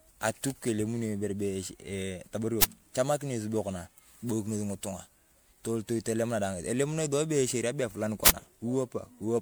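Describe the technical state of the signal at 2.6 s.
At 2.62 to 2.64 s, just before "echamakina esubio konaa", a 20 ms uninitialised buffer fault occurs. A block was sent to the output before audio was written into it, so stale memory contents played as samples. The result is a brief, loud burst of harsh digital noise.

Underlying this moment, as across the whole clip, the sound is swirly, smeared and hollow, with blurred attacks and nothing above 20.9 kHz. This is likely generation loss from repeated MP3 encoding at 128 kbit/s, several passes on shifting frame grids compounding quantisation noise.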